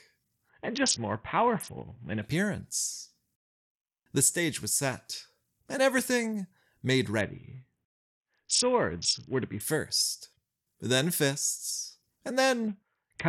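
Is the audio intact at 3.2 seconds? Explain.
Yes, the speech at 3.2 seconds plays through cleanly, with no dropout, click, distortion or other fault at that point.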